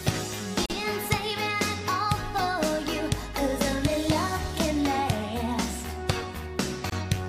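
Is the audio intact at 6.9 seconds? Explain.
No, there's a gap at a join of encoded pieces from 6.90 to 6.92 s: a roughly 24 ms gap, where untrimmed encoder delay and end padding leave a dropout with smeared edges.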